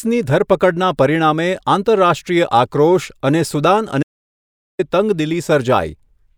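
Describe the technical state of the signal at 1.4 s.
At 1.4 s the speech signal is intact, with no audible fault at that moment.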